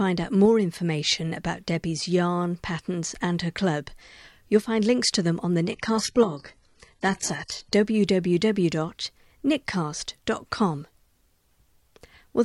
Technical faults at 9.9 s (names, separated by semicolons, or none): none